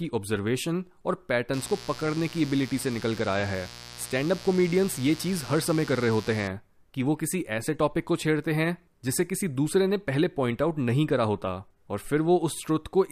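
From 1.53 s to 6.47 s a steady, raspy buzz sits under the speech, gritty rather than a smooth hum, at roughly 15 dB below it. This is mains buzz on a 60 Hz supply: something like a dimmer, a rectifier or a missing shield lets sharp switching spikes into the signal twice per mains cycle, and those spikes carry a dense train of 60 Hz harmonics up into the kilohertz range, which gives the buzz its edge.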